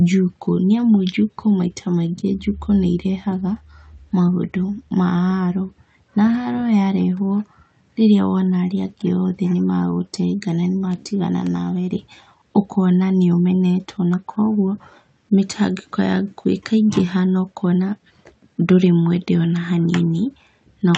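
No technical faults can be heard anywhere in the speech. It reaches the listener through a WebRTC call path, and the top of the spectrum stops at about 8 kHz, which fits an Opus codec running near 48 kbps.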